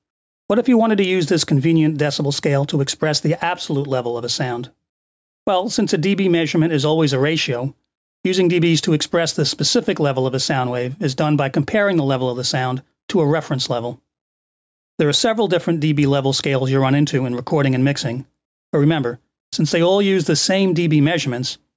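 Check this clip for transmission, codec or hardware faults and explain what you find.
One fault runs through the whole clip: gain pumping. The level breathes continuously. The gain ducks by roughly 5 dB as each loud sound arrives, so loud and quiet passages sit unnaturally close together and the audio feels squashed. The likely cause is microphone gain set far too high, with a fast limiter or compressor clamping down on every peak. On a waveform the envelope looks flattened, with peaks pinned at a similar height. The content stopping at 8 kHz comes from the call's microphone processing and is expected.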